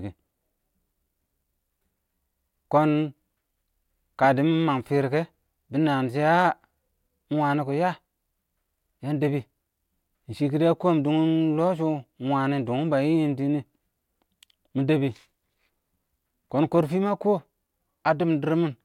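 No faults detected in this speech recording at any point.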